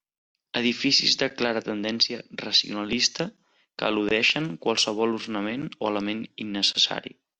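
From 4.37 to 6.79 s the speech turns dull and gritty. This is a Bluetooth SBC bit pool drop. The link was congested, so fewer bits were spent per frame. Top bands vanished, the rest grew coarse. The sound fits a bit pool cut from 31 to 12, near 88 kbps.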